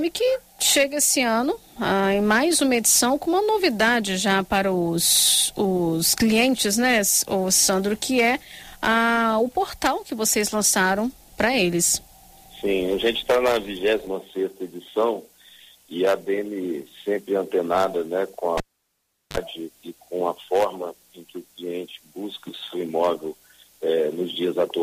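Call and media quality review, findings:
Cable pulled and plugged in, 18.58–19.37 s: pop, then near-silence for about 0.75 s, then a 41 ms burst of 50 Hz mains buzz as the plug tip touches before full contact, then a second pop as the signal returns. Suspect the analogue input connector or lead.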